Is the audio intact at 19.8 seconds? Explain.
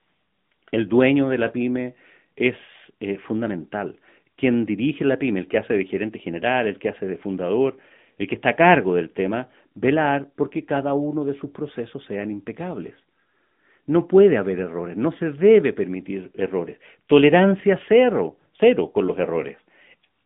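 No. At 19.8 seconds, as throughout, the speech carries AMR narrowband mobile codec damage. Nothing passes above 3.8 kHz, and the band sits between 150 Hz and 3.6 kHz. The vocal-tract model rebuilds the voice from sparse pulses, audibly buzzy and synthetic, suggesting a rate near 10 kbps.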